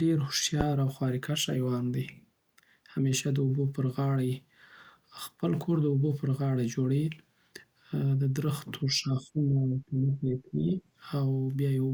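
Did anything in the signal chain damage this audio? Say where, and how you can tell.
Yes. At the analogue input stage, a phantom power thump lands at 0.61 to 0.71 s: a deep low-frequency knock that dies away in about 23 ms. A supply being switched on a live input pushes a DC step through the coupling capacitors, producing this pulse.

In call processing, between 8.89 and 10.83 s the speech dips by as much as about 20 dB and breaks up, with roughly one and a half seconds affected in total. This is likely speech suppressed in double talk: the echo canceller could not separate the talker from the overlapping far-end echo and attenuated both.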